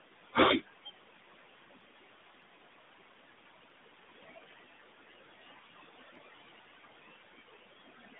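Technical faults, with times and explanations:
Throughout: noise suppressor artifacts. The suppressor pulls the room noise down by about 17 dB, estimating it frame by frame across frequency bands. The noise drops in pauses and returns under speech.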